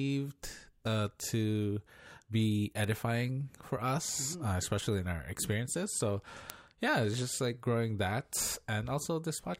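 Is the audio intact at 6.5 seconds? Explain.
No. At 6.5 s, just before "yeah it's just like", a bit error spike flips one sample to about -10 dBFS. It is a single sharp broadband tick, unlike a longer dropout click.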